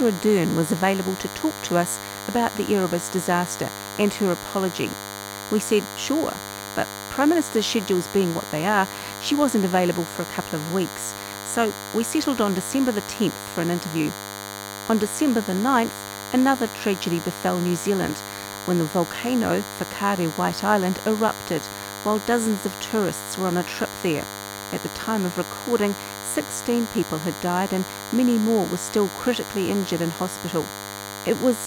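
DECT cordless phone buzz runs through the whole speech clip. A nearby DECT handset or base transmits a brief radio burst every 10 ms, which the audio circuitry rectifies into a thin, steady 100 Hz buzz rich in harmonics, sitting roughly 10 dB below the speech.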